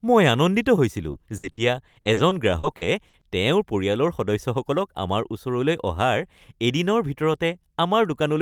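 It's a speech clip with a patch of repeated packet loss giving that robotic sound from about 1.11 to 3.23 s. Over those two seconds the audio keeps dropping out, roughly a dozen short holes, the longest around 60 ms, and each one gets papered over by stretching the last bit of sound. About a fifth of that stretch is filled-in rather than real, so it comes across choppy and robotic, with pieces missing.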